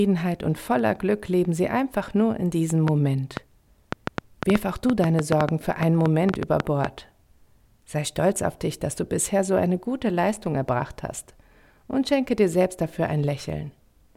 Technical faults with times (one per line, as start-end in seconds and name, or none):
2.88-6.86 train of clicks